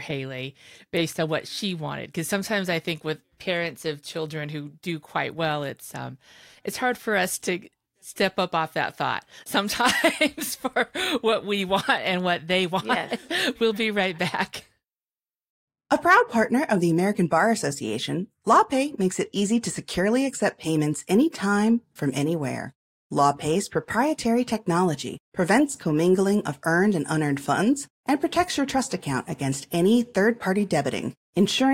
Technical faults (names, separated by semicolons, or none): none